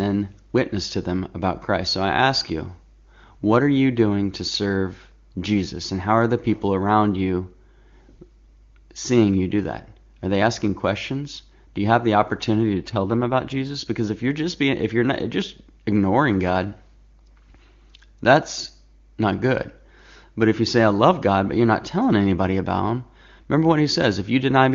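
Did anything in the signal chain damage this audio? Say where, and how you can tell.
Yes. At the network and codec stage, an AMR rate drop from 12.74 to 13.76 s, where the link forced the wideband codec down a mode. The speech stays wideband with no gap but turns rough and synthetic, which fits a step from 23.85 to 8.85 kbit/s.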